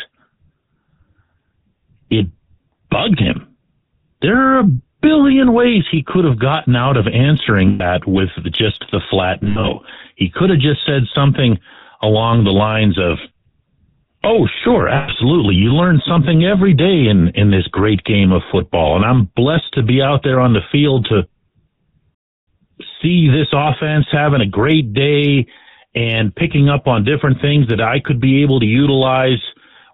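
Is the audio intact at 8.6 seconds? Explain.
No: at 8.6 s, as throughout, GSM full-rate codec damage is plainly audible as buzzy, gravelly speech from pulse-driven excitation, with a spectrogram showing nothing above 4 kHz.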